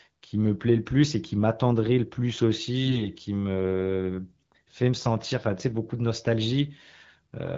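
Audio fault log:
2.86–3.06 s, AMR bit errors: for about a fifth of a second the sound turns hoarse and gargly, a scratchy roughness that keeps roughly the same pitch and loudness. Some of the less protected bits in the AMR frames came through flipped on a weak link, maybe a few percent of them, while the frame checks still passed. The excitation pulses land in the wrong spots and the fine pitch, gain and spectral values drift. Around it, the wideband AMR-WB coding sounds clear.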